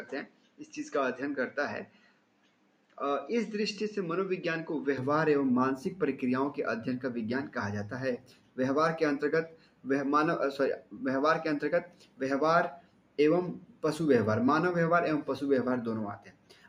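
For the first 5 seconds the sound is dull and band-limited, with faint added noise well below the signal. At 4.98 s it opens up again with no gap and no jump in level. That points to an input switched to a poorer device, likely a narrower-band microphone or headset profile. Throughout, steady tones and tails pump and thin by roughly ten decibels while attacks mostly pass, the mark of a noise suppressor applied to music or sounds: a speech-tuned processor treats sustained material as noise. It also produces sound cut by the noise suppressor, with sustained passages and decays sinking by up to about 12 dB at 0.25–0.67 s, 1.86–2.97 s, 8.18–8.58 s, 9.49–9.86 s, 10.79–11.01 s, 11.85–12.21 s, 12.77–13.83 s and 16.18 s to the end.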